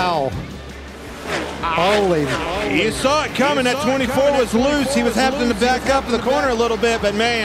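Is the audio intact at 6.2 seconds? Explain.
No. At 6.2 seconds the clip is inside a doubled audio track that runs from 2.33 to 6.55 s. A second, full-band copy of the sound trails the original by roughly 0.7 s and sits about 10 dB lower, with no decay or room colour, and it cuts in and out abruptly at the span edges. The likely cause is the same signal being captured a second time through a slower path.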